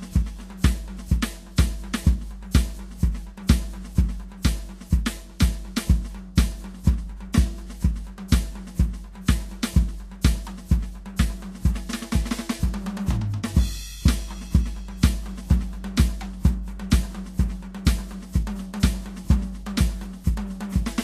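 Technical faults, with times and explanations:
Throughout, Vorbis compression: the music is band-limited, with nothing above about 14.1 kHz, and the treble that remains sounds hissy and grainy, with roughened tones and smeared attacks. This is likely low-rate Vorbis coding, consistent with roughly 36 kbps. At that rate the encoder keeps a smooth spectral outline but quantises the fine detail on top of it so coarsely that the high-frequency texture becomes noise of similar energy.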